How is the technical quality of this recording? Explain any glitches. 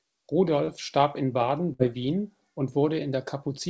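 The recording has two packet-loss glitches, both hidden by concealment in the receiver. It came through a call path whose audio stops at 8 kHz, which fits a wideband codec such as G.722.

Short concealed packet loss, 0.65 to 0.71 s, just before "starb in": about 30 ms of audio did not arrive in time. The decoder extended the preceding sound for about 27 ms and then cross-faded back into the received signal. It is heard as a brief smear or wobble, and part of the sound at that point is lost.

Burst of packet loss, 1.73 to 1.82 s: several consecutive packets were lost or arrived too late, about 60 ms of audio in total. The receiver continued the last sound for about 64 ms and attenuated it as the gap went on, giving a short held buzz or fading hiss. When the audio resumes, the section in between is missing, so the speech jumps forward.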